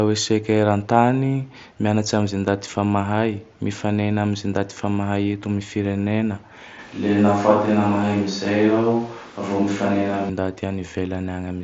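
A speech clip, carried over an mSBC Bluetooth headset link with nothing above about 7.7 kHz, in which from 6.79 to 10.29 s, just after "am firenena", the sound turns roomy and hollow with thinner bass. This is likely a switch to a distant microphone. The level barely changes. Room noise rises to roughly 25 dB below the speech, visible on a spectrogram as a raised noise floor filling the gaps and smeared reverberant tails, with abrupt edges at both ends.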